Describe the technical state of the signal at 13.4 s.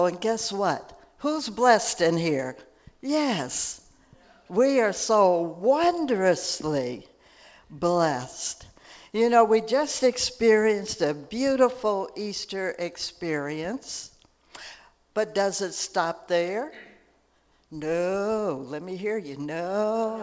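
At 13.4 s the signal is intact, with no fault present, only the ordinary band limit of the call path, which carries nothing above 8 kHz.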